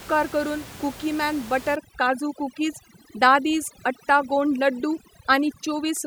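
From 1.76 s, after "करून कुकीमॅन", to the end, overdone noise removal gates off bands near the noise estimate. The room noise, about 18 dB below speech, becomes twinkling specks. A spectrogram shows a blanked background, scattered dots and holes in the speech harmonics.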